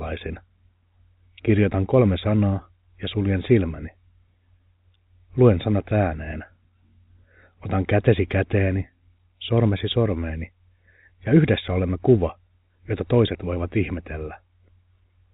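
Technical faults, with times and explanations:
No technical faults; the speech is carried over G.711 mu-law telephone coding, which fits a 64 kbps telephone path, so nothing above 4 kHz passes and a faint quantisation hiss rides with the signal level.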